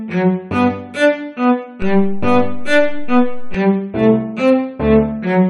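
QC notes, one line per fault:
1.82–3.55 s, DC step: the waveform's zero line jumps abruptly at 1.82 s by an offset of about -15 dBFS, holds there, then drops back at 3.55 s. Each jump is a near-instant level change, so it is heard as a low thump, one at each end, while the sound itself continues unaltered. On the waveform the whole trace sits visibly displaced from centre between the two edges; a spectrogram shows a brief broadband low-frequency burst at each transition.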